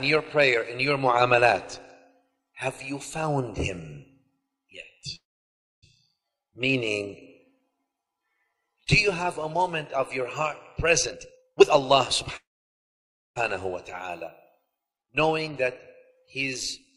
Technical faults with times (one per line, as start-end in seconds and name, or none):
5.15-5.84 call audio freeze
11.06-11.94 jitter buffer speed-up
12.36-13.38 call audio freeze
15.98-16.37 jitter buffer speed-up